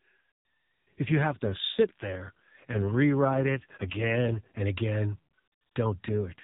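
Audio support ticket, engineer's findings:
AMR rate drop, 1.06–4.62 s and again 6.08 s to end. Speech turns rougher and buzzier, more synthetic, no gap, bandwidth unchanged. Consistent with the AMR-NB codec switching down, likely on a weak radio link, from its 12.2 kbps mode to roughly 5.9 kbps. Fewer bits per 20 ms frame leave a coarser excitation pulse model, with capacity shifted to error protection. Quality recovers between drops, where the lightly coded 12.2 kbps narrowband sound returns.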